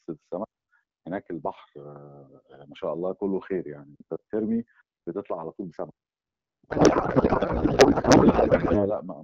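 Codec payload misread from 6.69 to 8.92 s: the AMR wideband stream, which sounds clear at around 12.65 kbit/s before this point, suddenly turns into garbled noise and warble that barely tracks the speech. The sender and receiver have fallen out of step on how the codec bits are packed, most plausibly octet-aligned frames being read as bandwidth-efficient ones. The decoder then pulls every field from the wrong bit position and builds sound from nonsense parameters.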